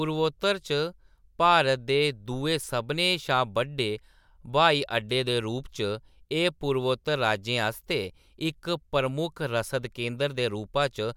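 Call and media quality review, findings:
No faults found in the speech clip. Nothing to escalate on this ticket.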